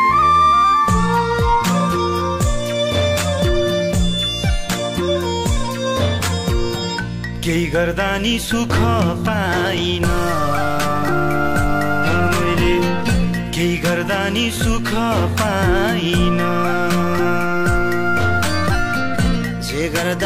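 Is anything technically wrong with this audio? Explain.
No, nothing technically wrong turns up anywhere in this audio.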